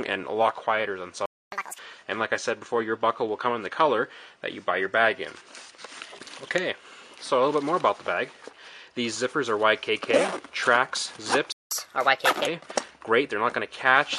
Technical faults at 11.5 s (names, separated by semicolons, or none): playback stall